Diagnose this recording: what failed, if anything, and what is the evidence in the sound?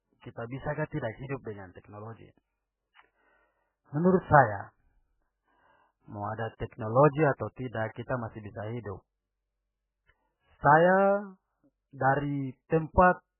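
Codec stage: the speech is cut off above 3 kHz throughout and sounds heavily watery, likely MP3 compression starved of bits, which fits a bitrate near 8 kbps.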